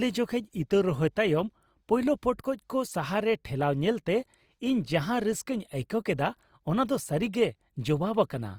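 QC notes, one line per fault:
Throughout, Opus compression: the speech sounds grainy and rough, with noisy grit over tonal parts, though the top end stays open to 20.3 kHz. This is likely Opus in CELT mode filling starved bands with noise, which fits roughly 24 kbps.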